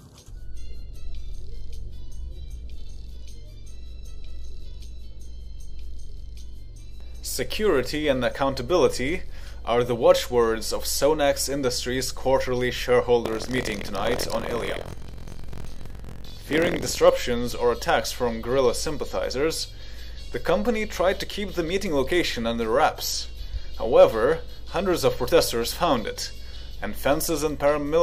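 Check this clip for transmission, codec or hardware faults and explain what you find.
One fault: buffer tearing from 13.24 to 17.00 s. The writing program and reading hardware have slipped and cross mid-period, so about a sixth of each buffer holds audio roughly a tenth of a second old, hard-joined on both sides. It sounds like a robotic 43.1 Hz rattle, which fits a 1024-sample buffer.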